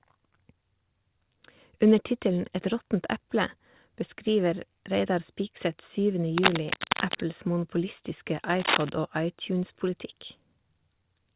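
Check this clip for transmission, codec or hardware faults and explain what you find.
Two bursts of cable scratch noise stand out over speech that reaches no higher than 4 kHz, which fits a narrowband call codec such as G.711 mu-law. The first runs from 6.38 to 7.26 s, the second from 8.60 to 8.89 s. Both are dense, uneven scratching at about the level of the speech. The likely cause is a worn cable or connector being moved, with its contact resistance fluctuating rapidly.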